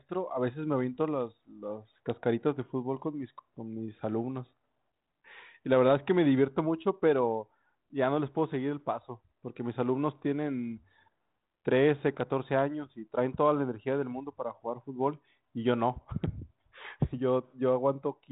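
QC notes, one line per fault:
No faults are present; the speech comes through G.726 ADPCM at 32 kbit/s with only light coding damage and nothing above 3.9 kHz, as expected for that telephone-band path.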